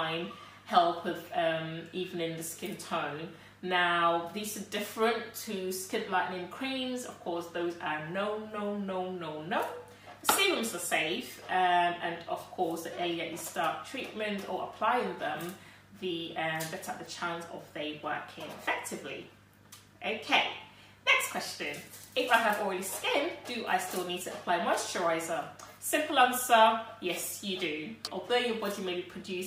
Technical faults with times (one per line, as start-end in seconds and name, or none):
none